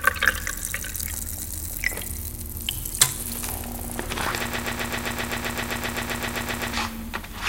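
A broken-record loop runs from 4.52 s to 6.74 s. A 0.13 s fragment of the sound repeats exactly, back to back, about 17 times, giving a rapid, mechanical stutter at roughly eight repeats per second. Whatever should have followed in those two seconds never arrives. The likely cause is the player, encoder or stream stalling and resending the last fragment it held until the flow resumed.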